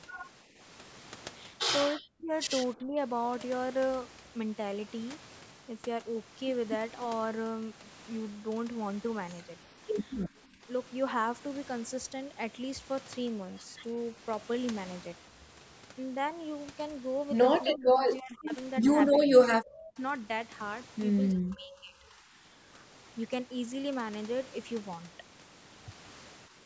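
Speech dips or drops out in short stretches at 0.46, 1.96, 2.75, 10.52, 17.72, 19.12, 21.32 and 26.49 s. This is most likely speech suppressed in double talk: with both ends talking, the echo canceller turns the near talker down along with the echo. The dips at 0.46 and 26.49 s are slight, a few dB. At 1.96 and 19.12 s the level falls by about 40 dB, close to silence. The stretch from 21.32 s loses about a second.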